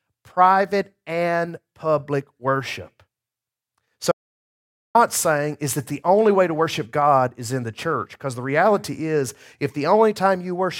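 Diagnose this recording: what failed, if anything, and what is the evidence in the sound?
Audio dropout to silence, 4.12–4.95 s: speech cuts mid-flow to silence with no room tone, unlike a noise gate; likely a lost input link.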